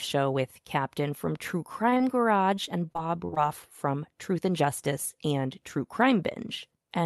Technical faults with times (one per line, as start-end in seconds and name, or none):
1.89-2.02 short stall from a late packet
1.94-1.98 short concealed packet loss
2.55-3.38 repeated packet loss (robotic sound)